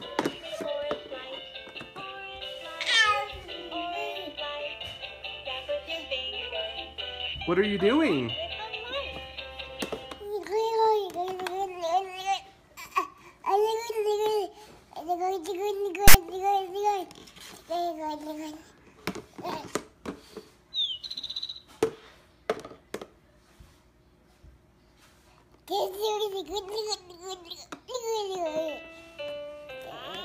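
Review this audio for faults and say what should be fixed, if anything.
At 16.08 to 16.14 s a short, loud rasp cuts in with hard edges at both ends and sits lopsided, pushed away from the centre line rather than swinging evenly around it. This is file tags played as audio. A block of text metadata was read out as if it were sample values. The character bytes cluster in a narrow range, which produces that offset, buzzy burst for about 67 ms before normal audio resumes. To prevent it, the player or decoder should parse the container properly and skip tag blocks instead of passing them through as sample data.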